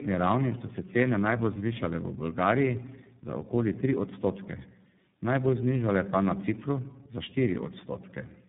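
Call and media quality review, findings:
Tandem speech coding across the full clip: the call passed through three separate speech codecs in sequence, decoded and re-encoded at each link, with each coder compressing the previous one's damage. The sound fits a chain ending in iLBC, likely after AMR-NB and G.726. Result: rough, muffled, warbly speech with nothing above 3.8 kHz, worse than any single narrowband link would produce.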